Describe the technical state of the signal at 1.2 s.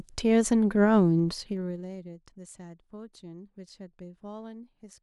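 At 1.2 s a level change is being applied in coarse 1 dB steps with no smoothing, about twenty per second, across 1.17 to 2.14 s as the speech drops by around 20 dB. Each jump clicks, giving audible zipper noise riding on the voice.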